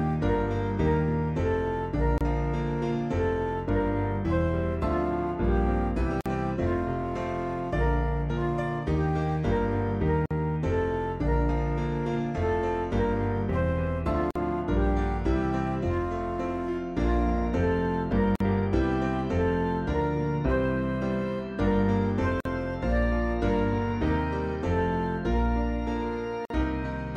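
Gaps at joins of encoded pieces open at 2.18, 6.21, 10.26, 14.31, 18.36, 22.40 and 26.45 s, one every 4 s. The first lasts 28 ms and the rest 49 ms each. The audio was encoded in separate chunks and spliced without trimming the encoder's start-up delay and end-of-chunk padding. Each gap is a brief dropout to silence with smeared edges, after which the sound resumes exactly where it left off.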